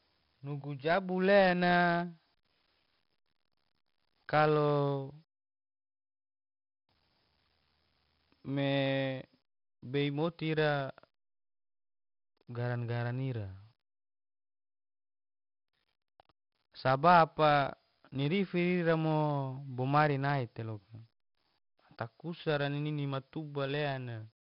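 4-bit ADPCM compression affects the whole recording, from start to finish. Each sample is coded as a coarse 4-bit step from a predicted value, and the damage here is heavy: a gritty hiss rides on every loud stretch of speech and rises and falls with it, while sharp consonant onsets distort because the step size cannot grow quickly enough. Nothing reaches above 5.4 kHz, so the speech sounds dull, which fits a low sample rate at around 44 kbps.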